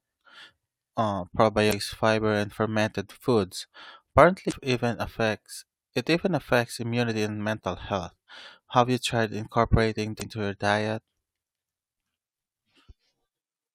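Damaged data in a compressed stream breaks the decoder three times: corrupted frames are misread, sync is lost, and the decoder hunts for the next valid header. Each break is a short blip of about 40 ms in the speech: at 1.69–1.73 s, just before "fiber and fermented foods"; at 4.48–4.53 s, ahead of "even affects it even"; and at 10.18–10.22 s, between "you tried incorporating" and "your diet".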